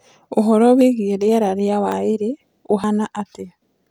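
At 0.81 s, 1.92 s and 2.84 s the speech jumps abruptly, with no gap of silence, as if a sliver of the recording had been snipped out and the ends butted together. The skips are short: a few tens of milliseconds at the first two points and around 70 milliseconds at 2.84 s. This is likely a dropped buffer (overrun), where the hardware overwrote audio before the program read it, discarding that stretch.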